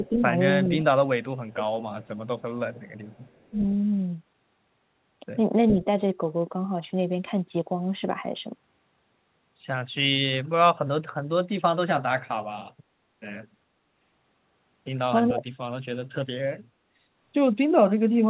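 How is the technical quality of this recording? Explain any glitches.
The recording has two kinds of glitch: brief level dips in the speech and delayed repeats of it. The band stops at 4 kHz throughout, which fits a G.711 mu-law call path at 64 kbps.

Speech suppressed in double talk occurs from 0.00 to 0.17 s and from 15.33 to 15.42 s. The speech dips by about 5 dB for roughly 100 ms and 70 ms respectively, likely because the echo canceller mistook overlapping talk for echo and attenuated it. A waveform shows a short sag in the envelope.

Echo leak, a delayed copy arriving 424 ms late, appears at 0.04–0.09 s, 1.49–1.65 s, 2.02–2.18 s and 2.74–3.6 s. The copy sits about 30 dB below the speech, except at 1.49 s, where it is only about 10 dB down. It is likely residual loudspeaker pickup that the canceller failed to remove. A spectrogram shows shifted duplicates of the speech harmonics.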